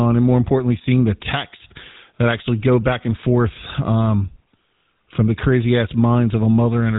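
Throughout, GSM full-rate codec damage: nothing above 4 kHz and a buzzy, gravelly roughness from pulse-driven excitation, unlike clean band-limiting, fitting the 13 kbps full-rate coder.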